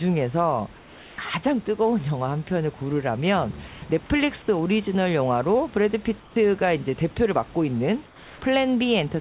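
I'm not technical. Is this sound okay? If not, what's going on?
No, not quite. In four short pauses, at 0.78 to 1.18 s, 3.68 to 3.82 s, 6.2 to 6.36 s and 8.06 to 8.42 s, the real room background drops out and gets replaced by a smoother, quieter hiss. That's comfort noise in place of the background, likely from the call system going quiet when nobody's talking and the receiving end filling each gap with made-up noise so it doesn't sound dead.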